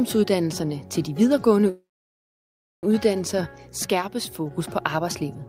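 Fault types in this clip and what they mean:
Call audio freeze: From 1.69 to 2.85 s the sound stalls. The last moment is carried on briefly as a fading buzz or hiss, then about 1.01 s of silence follows. When the audio resumes, it picks up exactly where it stopped. Nothing is lost, but everything after now runs about 1.14 s late. The likely cause is packets held up in transit, leaving the jitter buffer empty until they arrived.
One channel drops out: Between 3.86 and 4.51 s the level falls suddenly by about 6 dB, then returns. The drop is abrupt at both edges, not a fade. A 6 dB step is what a mono sum gives when one side of a stereo pair goes missing, since the shared content loses half its contribution. Anything present only in that side vanishes for those 0.65 s. The likely cause is a lost stereo channel.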